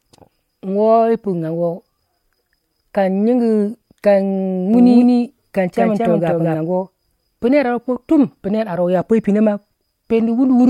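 From 4.74 s to 6.56 s the speech is heard twice. A doubled audio track sits under the original, trailing it by roughly a fifth of a second. The copy is about as loud as the first. It carries the full band, with no decay or room colour. It starts and stops abruptly. The likely cause is a second capture by a slower path, or an edit holding two copies out of step.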